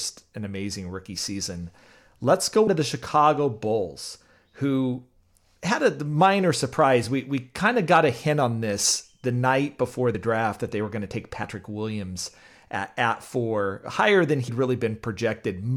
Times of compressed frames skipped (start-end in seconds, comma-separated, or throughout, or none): 2.66, 10.14, 11.43, 14.48